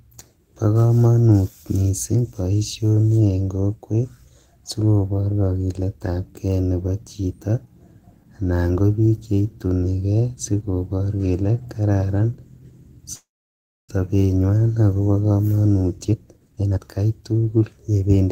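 At 13.15 s the speech stops and a brief fading buzz gives way to about 640 ms of silence before resuming at 13.91 s. This call audio freeze is likely caused by delayed packets draining the jitter buffer. About 732 ms was inserted and nothing was lost.

From 15.98 s to 18.17 s a jitter buffer speed-up plays the speech at 133% of normal rate with unchanged pitch, so it sounds hurried. The receiver trimmed short pitch-period slices repeatedly, cutting roughly 0.7 s of accumulated delay.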